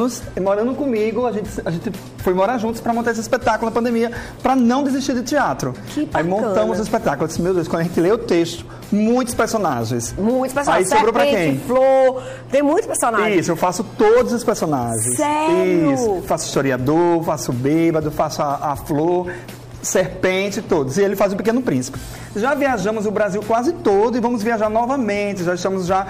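No technical faults are audible anywhere in the clip.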